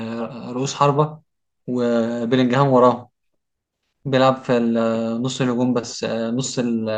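Nothing technically wrong turns up anywhere in this bit of speech, so there's no fault here to point to.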